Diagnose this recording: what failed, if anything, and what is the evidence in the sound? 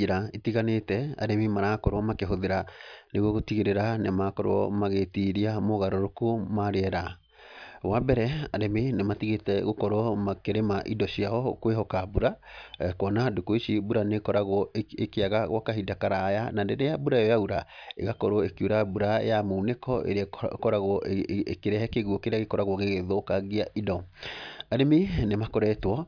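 Nothing has failed at any stage of the chain, and the speech signal plays throughout with no audible disturbance.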